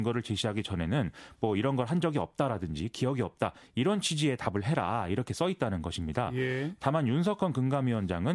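Nothing in this bit of speech catches the ear as a technical problem, so there's nothing here to flag.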